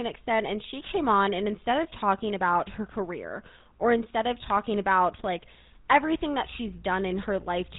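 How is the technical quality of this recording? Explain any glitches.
The quality is poor because of one codec fault. GSM full-rate codec damage runs throughout: the speech is rebuilt from a vocal-tract model driven by sparse regular pulses, giving plainly audible buzzy, gravelly roughness, nothing above 4 kHz, and a character that fits the 13 kbps coder.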